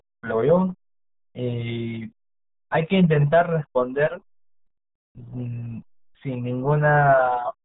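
Throughout, the speech carries heavy RealAudio 14.4 codec damage, which fits an 8 kbit/s dial-up stream. Everything above 3.8 kHz is gone, so a spectrogram shows a hard, flat ceiling over blotchy, smeared harmonics, and the voice sounds muffled and gargly.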